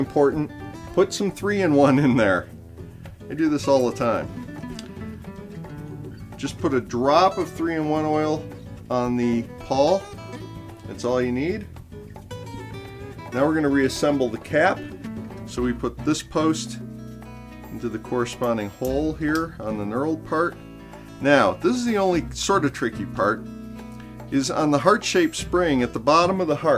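Listening through the whole recording, nothing stood out as a technical problem.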